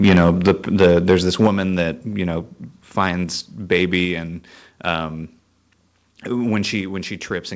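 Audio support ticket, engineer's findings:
Microphone overload at 0.04–0.51 s, 0.8–1.47 s and 3.72–3.95 s. Harsh crackle on loudest peaks, tops flattened. Input driven about 8, 6 and 2 dB past converter full scale. A small, shrinking share of samples clipped. Likely mic input gain set too high.

Microphone volume stepped down at 0.48 s (about 2 dB), 1.47 s just before "that you know" (about 6 dB) and 4.05 s (about 3 dB). Abrupt level drop in voice and background, each during or right after a distorted stretch. Likely call software's automatic input gain reducing device volume in single steps.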